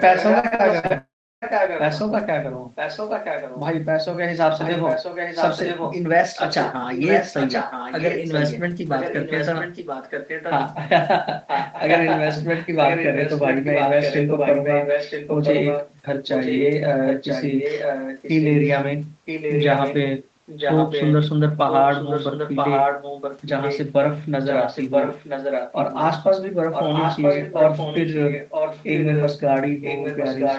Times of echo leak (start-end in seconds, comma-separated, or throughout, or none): 0.00-2.00, 2.75-3.61, 4.57-10.58, 11.46-18.72, 19.25-23.85, 24.44-26.03, 26.72-30.59